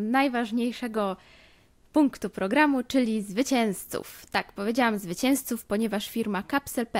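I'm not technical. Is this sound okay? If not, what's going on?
Yes, it's fine, and nothing in it sounds broken or out of place.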